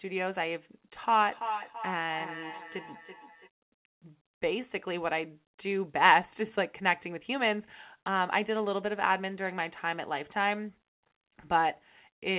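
From 1.01 to 3.50 s, another device's playback re-enters the microphone, a feedback echo between two devices: thin, ringing repeats about every 0.3 s.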